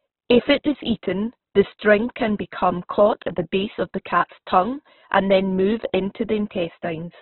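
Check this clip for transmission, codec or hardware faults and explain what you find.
The speech carries one codec fault, present from start to finish: heavy damage that is likely Opus compression. Nothing reaches above about 4.1 kHz, so the band is narrowband and the sound is dull and telephone-like. Running short of bits at what sounds like roughly 8 kbps, the music-mode coder keeps each band's energy but fills the detail with folded copies or noise. Voiced sounds therefore come across rough, grainy and hissy instead of swirling.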